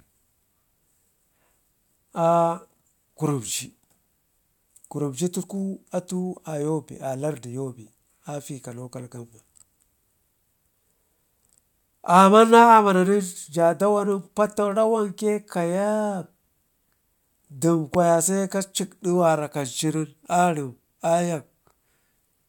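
At 17.94 s a single sharp pop cuts through the speech, lasting only about 25 ms and peaking roughly 10 dB above the surrounding level, while the speech carries on underneath without a break. This is a loud pop, most likely caused by a brief electrical pulse, such as a connector being touched, a switch operating or a static discharge, entering the signal chain and being shaped by the circuitry that follows it.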